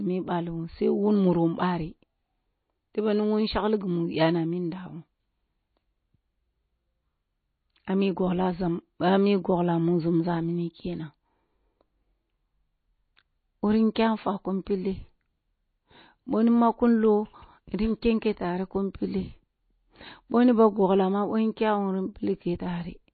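From start to finish the speech carries plainly audible damage of the kind produced by MP3 compression, likely at a low bitrate in the region of 24 kbps. Nothing is present above about 4.5 kHz, so the top of the spectrum is cut off flat and sibilants lose their edge. Weak frequency components drop in and out between frames, giving the voice a watery, swirling texture with metallic chirps on s sounds and softened, smeared onsets.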